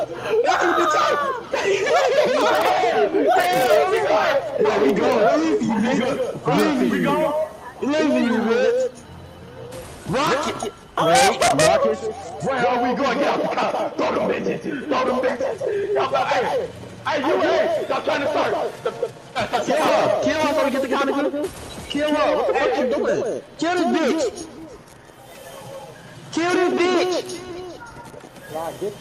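No technical faults are audible.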